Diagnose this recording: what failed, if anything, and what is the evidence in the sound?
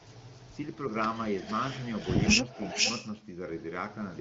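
Echo leak, at the call-processing stage. A delayed copy of the speech returns at 0.14–0.76 s, 1.38–1.55 s, 1.81–2.23 s and 2.50–3.12 s, trailing the original by about 0.45 s each time. It grows from very faint, about 35 dB below the speech, to nearly as loud, about 5 dB below, by the last event. The likely cause is a far-end loudspeaker whose echo canceller lets part of its microphone pickup back into the call.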